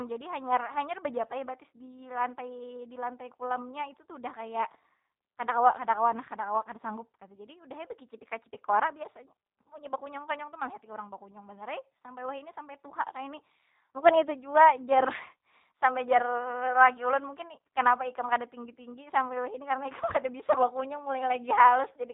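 From start to finish the speech sounds band-limited, with nothing above 4 kHz, and slightly rough and synthetic, a plainly audible G.729 codec effect. The voice is rebuilt from a vocal tract filter, pitch predictor and sparse pulses, which fits an 8 kbit/s G.729A stream.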